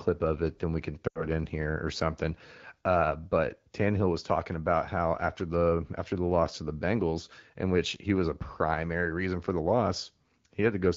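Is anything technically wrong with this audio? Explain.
Yes. Between 1.08 and 1.25 s, right after "it then we can" and before "in here or something", there are lost AMR speech frames. Radio errors corrupted a burst of speech frames, about 80 ms of signal, which fits four 20 ms frames. The AMR decoder covered the gap by reusing the last good pitch and vocal tract settings at falling gain, so the sound smears briefly, sinks to near silence, then returns weak or rough. On a waveform, the envelope collapses within about two frames. On a spectrogram, harmonics stretch flat before a near-empty gap. The surrounding speech carries the band-limited character of the AMR wideband (HD Voice) codec, which points to a rate around 12.65 kbit/s.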